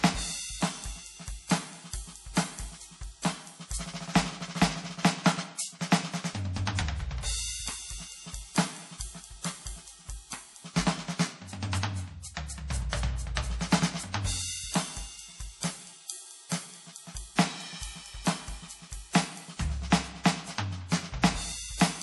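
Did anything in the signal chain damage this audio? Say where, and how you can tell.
Yes, at the codec stage: the music was likely squeezed through MP3 compression at a bitrate low enough to starve the encoder, plausibly around 48 kbps. Across the whole clip, the treble stops dead at 11.5 kHz, the fixed cut-off an MP3 encoder imposes when bits run short. Below that, quieter frequency components flicker in and out between frames, giving the music a plainly audible watery, swirling texture that never clears.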